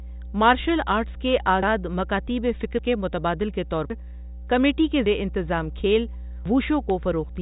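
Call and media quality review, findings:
Mains hum, whole clip: steady 60 Hz tone with a few low harmonics under the speech, sitting roughly 15 dB below it. Probable component: ground loop or a transformer near the capture chain leaking the power line into the signal. Check grounding and cable routing before anything else.

Dropped buffers (overrun) at 1.63, 2.79, 3.90, 5.06 and 6.46 s: each one's a jump with the speech skipping ahead, no gap of silence. Around a tenth of a second lost at 1.63, about half that at 2.79, closer to 150 ms at the last three. Likely the capture side not draining its buffers in time, so the hardware overwrote them and the two ends got spliced. The band tops out near 3.8 kHz with only faint coding grit, consistent with G.726 ADPCM around 40 kbit/s.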